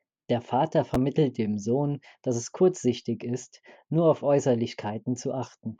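At 0.94 s there is a brief jumble: chunks out of order. A chunk of about 5.3 ms plays one chunk late, swapping places with its neighbour. Unlike a dropout, nothing is missing. The audio is only reordered, leaving three hard joins.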